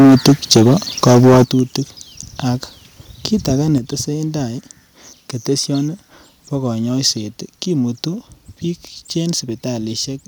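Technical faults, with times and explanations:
0.00–0.73 s and 1.03–1.43 s, microphone overload. The loudest peaks sound flattened, with a harsh, crackling edge. The input likely ran about 11 dB and then about 10 dB past the converter's limit. Roughly a fifth to a third of samples had their tops sheared off.
1.44 s and 3.78 s, microphone volume stepped down. Speech and background both drop suddenly, by about 10 dB and then about 5 dB. The first drop comes right after the distorted peaks. The second follows "kit age". Each was likely call software cutting the input gain in one step.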